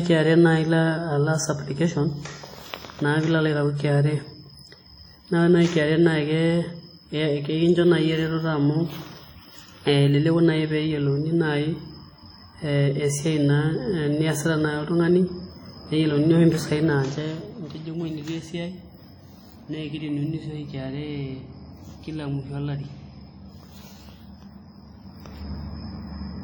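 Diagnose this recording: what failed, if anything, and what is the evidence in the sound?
The codec stage failed. Throughout the speech there is heavy transform-codec damage: ringing, a washy smear and hiss that rises and falls with the signal. The likely cause is WMA compression at a low bitrate near 32 kbps. Long transform blocks smear quantisation noise across tens of milliseconds and discard weak spectral lines.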